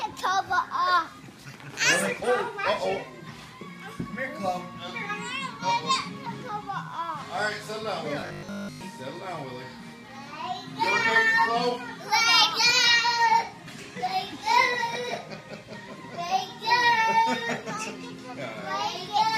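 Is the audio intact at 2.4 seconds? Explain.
Yes, at 2.4 seconds the audio plays through cleanly, with no dropout, click, glitch or other fault at that moment.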